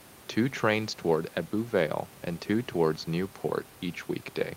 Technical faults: none

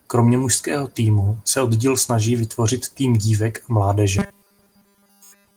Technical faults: robotic sound from repeated short buffers

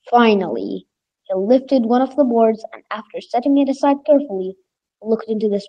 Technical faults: none

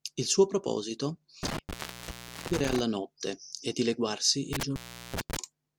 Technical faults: intermittent contact

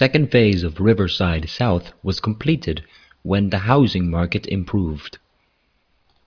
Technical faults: none

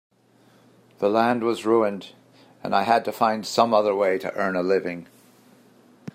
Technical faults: clock drift buffer slips

